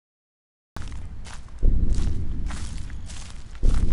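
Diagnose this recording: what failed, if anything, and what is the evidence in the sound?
Capture began late, a cut-off start at the recording or stream stage: the first 0.77 s is digital silence, then the sound enters at 0.77 s already in progress, with no attack or fade-in. The waveform jumps straight from zero to mid-signal level.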